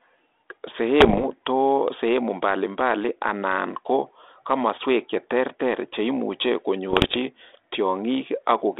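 This speech recording has two short stretches of pops and rough, gritty bursts with brief jumps in level, at 1.00 to 1.27 s and 6.90 to 7.17 s. These are bit errors on an ADPCM link, at a rate of roughly one or two percent, over telephone-band audio that fits 32 kbit/s G.726. Each flipped bit throws off the decoder's step size and prediction, so the damage rings on briefly.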